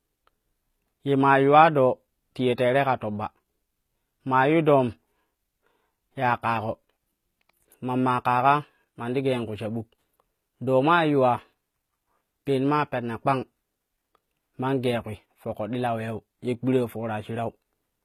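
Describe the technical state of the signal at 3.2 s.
At 3.2 s the speech carries the damage heard across the whole clip, likely HE-AAC compression at a low bitrate near 20 kbps. Unlike a plain low-pass, the treble is present but rebuilt from copied lower bands, so s sounds come out gritty, lispy and metallic.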